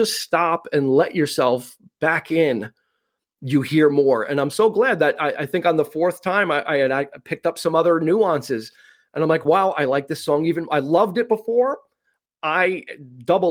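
No technical faults can be heard anywhere in the speech.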